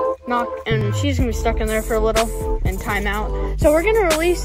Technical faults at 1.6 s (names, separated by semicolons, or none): none